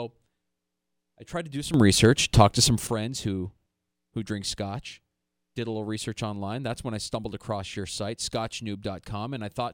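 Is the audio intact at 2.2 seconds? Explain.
No. A sudden gain jump runs from 1.74 to 2.87 s. The speech and its background noise jump up together by about 11 dB, then drop back at the end. The cause is likely a digital gain setting applied instantly, between adjacent samples, with no ramp to smooth the transition.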